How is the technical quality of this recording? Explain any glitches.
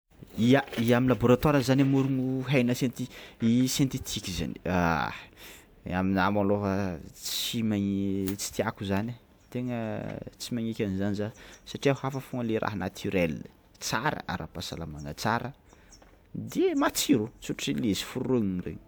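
The technical quality of this recording shows no glitches to explain, and the short fade-in over the first 0.12 s is a smooth, deliberate-sounding ramp rather than a fault.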